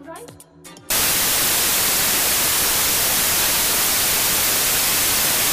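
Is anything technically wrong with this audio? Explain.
Yes. Samples built from the wrong bytes, from 0.90 s to the end at 5.52 s: each sample's bytes are assembled wrongly, so the rapidly changing low bits become the dominant part of every value. The sound turns into loud, harsh broadband noise, close to white on loud passages.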